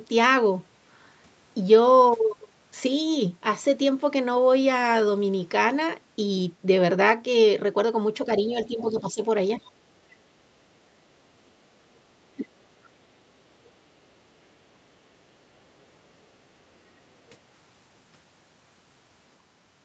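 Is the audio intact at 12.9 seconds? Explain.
No. From 12.84 to 12.89 s, a brief scrap of a second voice sits very faintly beneath the main talker, roughly 40 dB below the speech, lasting only about 50 ms before it vanishes. This is the other side's voice leaking through, likely because the talker's device was playing the far end on a loudspeaker and the echo canceller left a small residue of it in the microphone signal.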